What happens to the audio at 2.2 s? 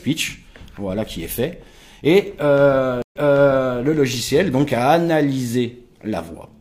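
Nothing goes wrong at 2.2 s; the audio plays through that moment intact, with no dropout, click or other technical fault.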